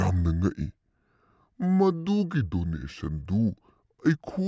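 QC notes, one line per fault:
throughout, wrong sample rate: the speech sounds low and sluggish, running at 0.726 times normal speed and 5.55 semitones flat. The samples are played out slower than they were captured, with no conversion, which fits 22 kHz audio played at 16 kHz.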